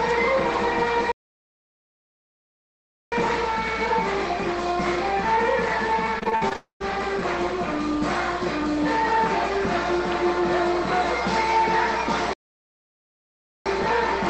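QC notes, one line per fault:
1.12–3.12 s and 12.33–13.66 s, playback stall. The sound stops in mid-flow and goes silent for about 2.0 s the first time and about 1.32 s the second. A gap this clean and long is likely a stall in the player, where output waits for data or a blocked thread and then carries on.
6.19–6.84 s, repeated packet loss (robotic sound). Seven short holes fall in this 0.65 s stretch, the longest about 59 ms. About 0.16 s of sound is missing. Each hole is patched by stretching the last bit of sound, so roughly a quarter of the span is synthetic fill. The quick alternation of real and patched sound gives a choppy, robotic texture with pieces gone.
6.56–6.82 s, long network dropout. Inside the choppy stretch, the sound turns into a continuing buzz or hiss that fades, then about 0.12 s of silence. Roughly 0.24 s of audio is never played, and the sound returns further on without it. 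Continuation that decays to silence points to a likely run of lost network audio, which the receiver could only cover for a short time before giving up.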